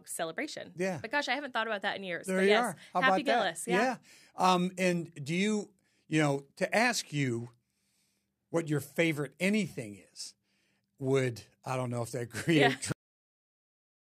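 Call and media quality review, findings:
Cut-off end at 12.92 s: speech stops mid-sound, straight to digital silence until clip end; final buffers never written. Abrupt, no decay, unlike a fade-out or natural pause.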